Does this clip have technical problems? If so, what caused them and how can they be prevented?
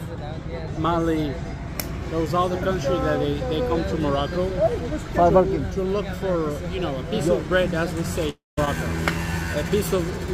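Yes. A long network dropout runs from 8.29 to 8.59 s. The receiver likely stopped getting packets, so it stretched the last sound into a fading buzz that decays to about 170 ms of silence, and about 280 ms of audio never returns. A more stable connection or a larger jitter buffer would help prevent it.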